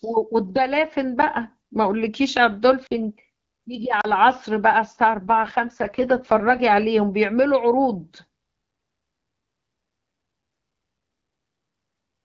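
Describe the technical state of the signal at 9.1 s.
At 9.1 s the speech is intact, with no fault, only the clear, band-limited sound of the AMR wideband (HD Voice) codec it passes through.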